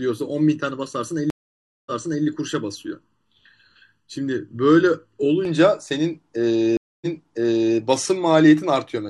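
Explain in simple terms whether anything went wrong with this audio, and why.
Two things went wrong.

From the start until about 5.45 s there is channel delay, causing comb filtering. One stereo channel runs less than a millisecond behind the other, and when they are mixed into one, certain pitches cancel, starting around 700 Hz and repeating at even steps up the range. The speech sounds hollow and phasey, as if spoken through a tube. Simple muffling dulls only the treble; here the hollowness sits right in the middle of the voice.

There are also two stream reconnects. At 1.30 s the audio goes silent for about 0.56 s, then picks up again roughly 0.38 s earlier than where it stopped, so a short stretch is heard twice, ending by 2.25 s. At 6.77 s it happens again: a quarter-second gap, then a jump back of about 0.77 s, settled by 7.78 s. An ordinary dropout simply leaves a hole or skips ahead. 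Here the player lost its connection, rejoined, and the server resent a little of what had already played, which is why parts repeat.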